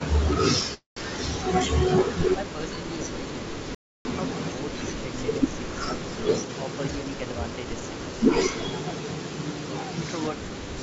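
A speech recording carried over a call path whose band ends at 8 kHz, which points to G.722 at around 64 kbps, carries three separate faults. From 0.74 to 0.98 s there is a call audio freeze: the last sound is stretched into a fading buzz that settles into about 140 ms of silence, and then the speech resumes where it stopped. The 225 ms gap is inserted rather than lost, so nothing is missing, but the rest of the call now runs 225 ms later. The likely cause is delayed packets draining the jitter buffer, with the receiver filling the wait until they arrive. At 3.75 s the audio cuts out abruptly and returns at 4.05 s. This is an audio dropout to silence lasting about 303 ms. The gap is silent with no room tone beneath it, and whatever was spoken during it is gone. It most likely comes from the input being lost, through a link failure, a disconnect or a momentary mute, while the encoder kept writing silence. 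Between 6.42 and 7.81 s a jitter buffer speed-up makes the speech run at about 116% of normal rate while the pitch stays unchanged, giving a hurried delivery. The receiver is trimming a backlog of late-arriving packets by cutting out short pitch-period slices in quick succession, removing roughly a fifth of a second in total.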